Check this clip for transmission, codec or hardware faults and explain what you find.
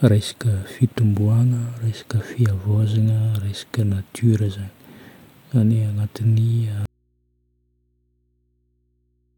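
One fault is present: an audio dropout to a faint residue. At 6.86 s the speech cuts off abruptly and does not return before the end of the clip. What remains is a low mains hum, roughly 45 dB below the speech level, with no trace of the wanted signal. The likely cause is a loss of the source feed, such as a disconnected cable or failed upstream stage, while the downstream input stayed live and picked up hum on its open, unterminated connection.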